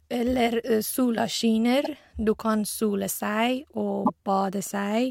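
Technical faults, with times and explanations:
1.84–1.89 s and 4.05–4.10 s, repeated frames: a 48 ms chunk plays twice, likely two compressed frames resent, giving a quick stutter and adding 48 ms each time.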